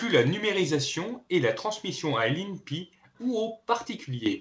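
At 4.26 s, right at the end of the clip, the microphone volume is stepped up. The call software judged the input too quiet and raised the device gain by about 9 dB in a single jump, so voice and background noise become louder together and stay there. On a waveform the envelope widens abruptly at that instant. On a spectrogram every band brightens at once, with the energy still stopping at 8 kHz, the bandwidth limit of the call codec, which fits G.722 at 64 kbps.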